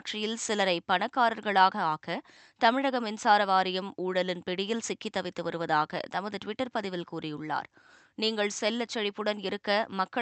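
Nothing stood out on listening to this speech, which comes through a WebRTC call path with the top end rolled off at around 8 kHz.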